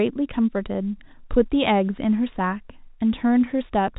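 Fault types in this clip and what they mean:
Nothing's gone wrong in this speech clip, and the narrow telephone band that tops out around 4 kHz is just how the line carries it.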